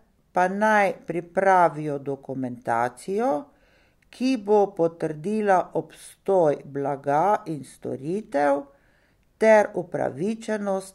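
Nothing technical trips up this bit of speech; there's no glitch or fault to point to anywhere along the way.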